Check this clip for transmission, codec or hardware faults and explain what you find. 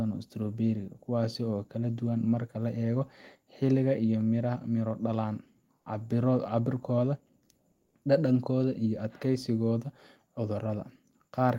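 One fault: comfort noise in place of the background, from 7.71 to 7.95 s. During a pause, the sender likely stopped transmitting under discontinuous transmission, as Opus DTX does, and the receiver synthesised filler. For about 240 ms the real background, roughly 48 dB below the loudest sound, becomes a smooth, featureless hiss at the same level.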